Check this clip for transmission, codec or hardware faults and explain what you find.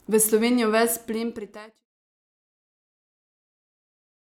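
Nothing stood out on listening, and the gradual fade-out of the speech, which begins at around half a second and is complete by 1.86 s, sounds like a deliberate edit rather than a problem.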